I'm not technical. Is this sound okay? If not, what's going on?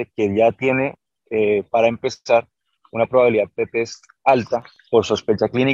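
No. There are CD scratch ticks from 4.33 to 4.76 s: four quick clicks in a row, the longest lasting only about a millisecond, at roughly seven per second. A scratch or mark on the disc ruined more data than the player's built-in repair could rebuild, and the damaged spot passed under the laser once per turn of the disc. Each time, the player guessed or silenced the missing bits, leaving a small tick.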